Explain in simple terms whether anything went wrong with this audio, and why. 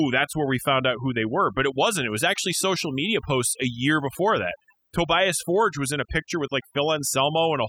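Overdone noise removal runs throughout: a cleanup tool set too strong shut off quiet sounds with the noise, leaving twinkling near-silence behind the voice.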